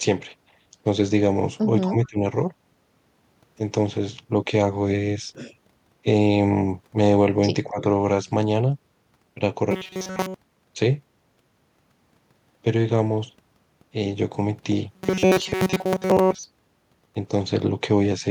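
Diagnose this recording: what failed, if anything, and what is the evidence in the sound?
Call processing failed first. At 1.81 to 2.23 s the speech sinks by about 20 dB. At 7.7 to 7.84 s it dips again, by about 15 dB. This is likely speech suppressed in double talk. The echo canceller could not separate its own talker from the loudspeaker echo and attenuated both.

The driver or buffer stage failed next. From 9.71 to 10.42 s and again from 14.94 to 16.46 s, the speech turns into a metallic buzz at 188 Hz. The likely cause is robotic sound from repeated short buffers. Late audio is patched by looping a slice of about 5.3 ms, so most of that stretch is repeats.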